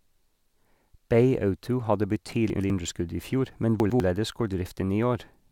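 At 2.5 to 2.7 s, and again at 3.8 to 4.0 s, the speech briefly scrambles: chunks out of order. In each spot two 100 ms pieces have swapped places, the first arriving one chunk late and playing after its successor. Each spot has three hard joins, and the syllables jumble. Unlike a dropout, nothing goes missing and no gap opens. Every piece of sound is still present, only misplaced, so the timing stays intact while the order is wrong.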